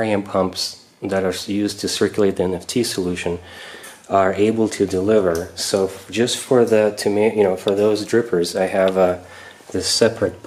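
No faults detected anywhere in the audio.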